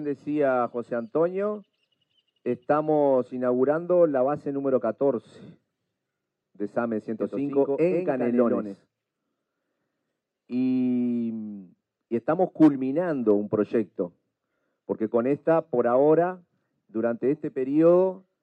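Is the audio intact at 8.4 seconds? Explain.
No. A doubled audio track runs from 7.19 to 8.75 s: a dry copy, about 5 dB quieter, trails roughly 100 ms behind, likely from a second, slower capture path.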